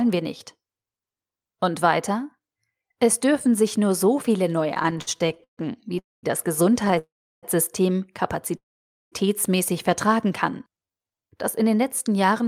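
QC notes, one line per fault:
4.69–5.59 s, repeated stalls (stutter): the sound halts and resumes in 18 short gaps, the longest about 136 ms, with about 340 ms filled in by continuing the last sound, over a third of the span. Nothing is lost, but it drags and judders because packets reached the jitter buffer more slowly than they were played out, so it kept running dry.
5.99–6.25 s, call audio freeze: the sound stops and a held fragment fades into about 200 ms of silence, then carries on exactly where it left off, putting about 243 ms of delay into the stream. The likely cause is packets held up in transit, emptying the jitter buffer.
6.85–6.99 s, repeated stalls (stutter): four tiny hiccups, none longer than about 11 ms, fill about 37 ms with continued sound as the buffer briefly empties again, leading straight into the next freeze.
6.99–7.45 s, call audio freeze: a longer hold fades into about 350 ms of silence before the audio resumes unbroken, adding about 442 ms of delay.
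8.57–9.14 s, call audio freeze: the longest halt, fading to about 510 ms of silence and adding about 550 ms of delay, with no sound missing once playback resumes.
10.52–11.28 s, jitter buffer slow-down: the audio runs at about 85% speed with its pitch unchanged, so sounds are drawn out, with about 120 ms added in total. The receiver is rebuilding its reserve by repeating single pitch periods and slivers of pauses over and over, which stretches the sound without shifting its pitch.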